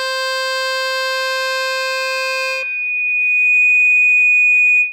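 From the very start the music has a washy, ringing quality, with a hiss that rises and falls along with the playing and a smeared edge on the transients. That points to lossy encoding, likely WMA compression from an older, simple encoder at a low bitrate, somewhere around 48 kbps. Its long transform blocks spread the quantisation noise over tens of milliseconds, and the weaker spectral detail gets thrown away. The damage is plainly audible, though the band still reaches up to 20 kHz.

At 1.12 s a loudspeaker feedback squeal kicks in. It's a single tone at 2.5 kHz, and it keeps going to the end of the clip. The mic is hearing the speaker it feeds, and at that frequency the loop gain is above one, so the tone keeps feeding itself. It swells over about three seconds until it sits roughly 10 dB above the music, a sharp, piercing whistle riding on top of everything.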